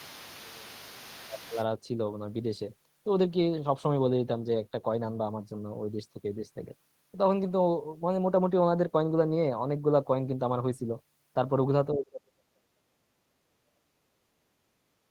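From 0.0 to 0.7 s the speech dips by about 20 dB, and from 1.11 to 1.58 s by about 15 dB. From 11.93 s to the end it sinks by about 40 dB. This is speech suppressed in double talk, likely an echo canceller turning the talker down while both sides spoke. Beneath the opening, from 0.0 to 1.65 s, a faint second voice sits about 20 dB below the speech. This is the other side's voice leaking through, likely loudspeaker echo the canceller left in the microphone signal.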